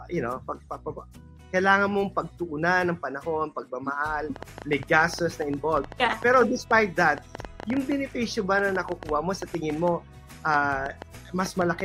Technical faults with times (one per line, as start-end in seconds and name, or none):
4.36-11.81 train of clicks